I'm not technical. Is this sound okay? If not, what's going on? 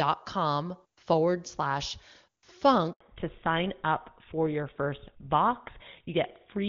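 No. At 2.93 seconds there is a handover gap. The call switched networks, and the speech cuts out completely for 80 milliseconds. Right after, at 3.01 seconds, comes a fallback to narrowband. The clear HD Voice sound of the first part gives way to an older phone codec. Everything above 4 kHz disappears, so the voice sounds duller and rougher until the end.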